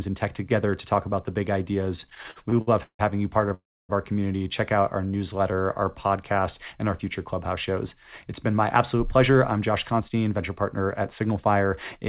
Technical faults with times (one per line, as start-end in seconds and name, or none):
1.96-3.01 repeated stalls (stutter)
3.54-3.91 call audio freeze
5.01-6.74 jitter buffer slow-down
8.53-11.97 jitter buffer speed-up